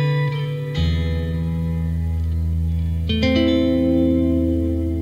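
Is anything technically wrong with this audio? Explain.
No, nothing technically wrong can be heard in this audio. Nothing in the sound points to a problem in how it was captured, processed or played back.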